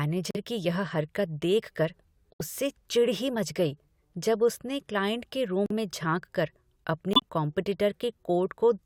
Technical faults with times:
0.31-0.36 corrupt frame muted
2.34-2.42 corrupt frame muted
5.66-5.72 corrupt frame muted
7.13-7.24 corrupt frame muted

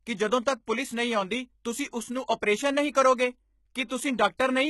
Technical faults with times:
0.00-4.69 HE-AAC compression
0.66 pre-echo
1.91 pre-echo
2.41 pre-echo
2.93-2.95 pre-echo
3.88-3.90 pre-echo

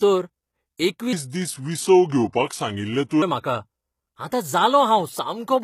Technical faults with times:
0.00-5.64 HE-AAC compression
0.76-0.79 pre-echo
1.13-3.22 section at the wrong speed

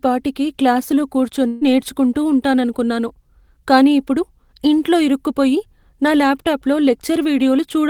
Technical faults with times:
1.47-1.63 burst of packet loss

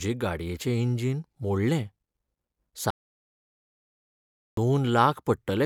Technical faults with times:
2.90-4.57 audio dropout to silence

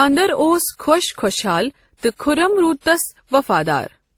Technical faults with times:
0.00-4.17 transcoding between lossy codecs

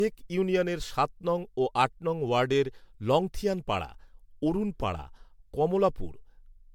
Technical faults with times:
0.00-6.74 generation loss

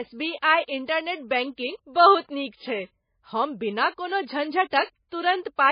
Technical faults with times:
0.00-5.72 MP3 compression

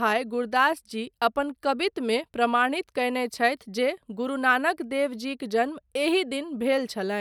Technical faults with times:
none

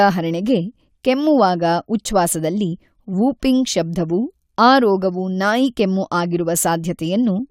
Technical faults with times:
none

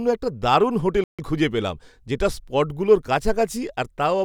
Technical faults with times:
1.04-1.19 playback stall

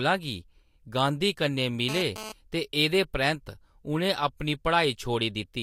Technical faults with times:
1.89-2.32 GSM phone buzz

